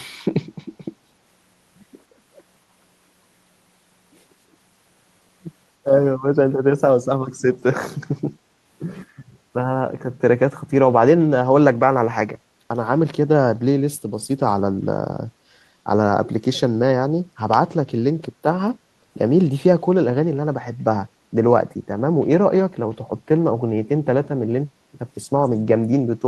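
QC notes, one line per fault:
0.04–0.17 s, echo leak: a very faint, roughly 40 dB down copy of the speech arrives 243 ms behind the original for about 0.13 s, heard as a brief ghostly trace. This is likely residual far-end pickup from a loudspeaker-side microphone that the echo canceller failed to fully suppress and sent back.
14.3–14.35 s, echo leak: the same faint 243 ms delayed copy returns for only 50 ms, a short scrap likely from the same incomplete cancellation.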